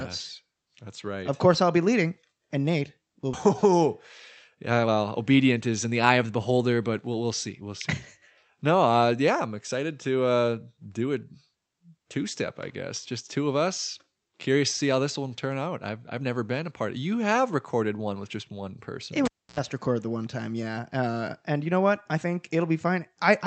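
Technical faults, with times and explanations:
3.33 to 3.35 s, skip ahead. About a second of speech is missing. Playback jumps straight over it with no gap and no filler. The two sides are joined almost directly, so the speech lurches forward mid-flow. Audio that was already waiting took the place of the lost stretch. That stretch was dropped either on the way or by the jitter buffer when it overflowed. The delay shrank by about the same second.
4.55 to 6.32 s, jitter buffer speed-up. The speech runs at about 118% speed while the pitch stays the same, and it sounds hurried. It ends just before "beholder but we'll we'll". The buffer was holding more audio than it aims for. To bring the delay down, the receiver cut out short pieces of one or a few pitch periods, many times in a row. About a third of a second was removed in total.
19.25 to 19.59 s, cable pulled and plugged in. A live cable was pulled and then pushed back in, just before "record the one time". 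A pop marks the pull. Near silence follows for about 0.29 s. A burst of 60 Hz mains buzz lasts about 0.08 s, while only the tip touches. A second pop comes as the sound returns.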